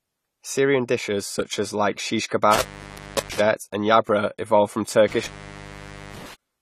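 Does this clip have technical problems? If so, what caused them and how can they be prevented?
Yes. The speech sounds dull and smeared throughout, with plainly audible codec damage and nothing above 14 kHz. The likely cause is AAC compression, AAC-LC at a low bitrate, which fits about 32 kbps. That bitrate forces quantisation against a hearing model, a lowered cut-off and holes in the spectrum. This smeared, gappy texture is what separates it from a clean low-pass filter. Encoding at a higher bitrate prevents it.

Pre-echo appears from 2.26 to 2.31 s, just after "such as like shish". There a hiss spreads about 45 ms ahead of a sharp attack, because the codec spreads noise sized for the loud onset across the whole block. Unlike a click, the hiss comes before the transient and softens it. Higher bitrates or shorter transform blocks avoid it.

Intermittent contact cuts the sound twice. The first break follows "such as like shish", running 2.53 to 3.40 s, with the line open for about 0.67 s. 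The second follows "evolved from", running 5.08 to 6.34 s, open about 0.87 s. Crackle at the edges and leftover hiss distinguish these breaks from codec dropouts. Secure, well-maintained cables and connectors prevent them.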